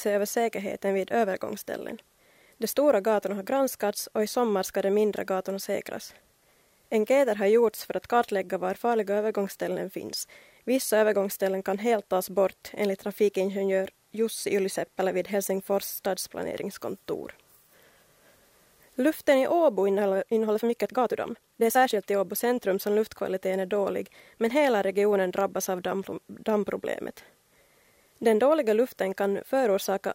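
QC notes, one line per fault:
19.82 to 22.02 s: time-stretched section. Pace jumps to about 1.36 times faster with pitch unchanged, sounding rushed, likely from short pieces being dropped.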